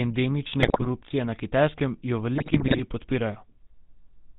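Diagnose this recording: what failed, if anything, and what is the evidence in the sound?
The codec stage failed audibly: the whole speech clip carries GSM full-rate codec damage, a buzzy, gravelly roughness that fits the 13 kbps full-rate coder. It rebuilds the voice from a vocal-tract filter excited by regularly spaced pulses, keeping only a third of the excitation samples, so fine detail turns to grit. On a spectrogram the content stops hard near 4 kHz, with a smeared, comb-like harmonic structure and no clean upper bands.

The network link added GSM bit errors at 0.60 to 0.89 s and again at 2.38 to 2.82 s, heard as squawks, pops and gargling breaking through the voice. The sound points to a corrupted radio link with roughly 3% of bits flipped. Damaged filter, pitch and gain parameters reach the decoder, bending the spectrum or boosting the level frame after frame while the bad patch lasts. 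The waveform shows sudden amplitude spikes in those spans, and the spectrogram shows blocky, frame-sized patches of misplaced energy.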